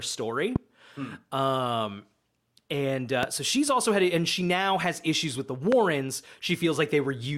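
Speech with three loud pops, at 0.56–0.58 s, at 3.23–3.25 s before "so she's also had", and at 5.72–5.75 s after "has issues with the". Each is a single sharp click, about 15 dB above the speech. A sudden voltage spike, likely from static or a switch, is the cause.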